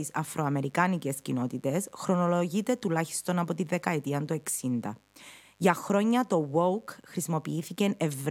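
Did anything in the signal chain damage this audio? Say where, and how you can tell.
Yes. The damage happened in the analogue wiring, before conversion. A mains buzz runs under the speech for the whole clip. It is a steady, raspy tone built on 50 Hz, sitting faint, roughly 40 dB below the speech. Its edge comes from harmonics climbing well above the fundamental. Switching spikes, from a dimmer, a rectifier or an unshielded run, got into the line twice per mains cycle and were recorded with the signal.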